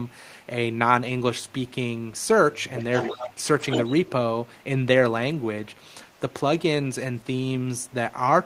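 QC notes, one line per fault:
1.48–1.71 s, 6.15–6.20 s, 7.18–7.35 s, 7.75–7.94 s: echo leak, a very faint copy of the speech about 40 dB down arriving 229 ms late, likely residual loudspeaker echo. On a spectrogram, weak ghost harmonics trail the originals.
2.75–3.42 s: echo leak, a clearly audible delayed repeat about 10 dB below the speech, 229 ms behind, likely an echo canceller letting far-end pickup through. The waveform shows a smaller duplicate envelope.
3.59–4.10 s: echo leak, a strong 229 ms echo only about 5 dB under the speech, likely uncancelled loudspeaker sound. The spectrogram shows near-equal shifted harmonic patterns overlapping.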